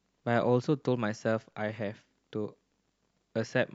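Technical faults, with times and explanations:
Nothing stood out as a technical problem on listening to this speech recording.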